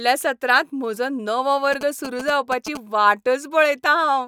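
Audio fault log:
1.73 to 2.77 s, GSM signalling bursts. A galloping dit-dit-dit of short buzzes cuts across the speech, about 10 dB below it. A nearby 2G phone is signalling in bursts. The audio circuit rectifies them, giving a 217 Hz buzz.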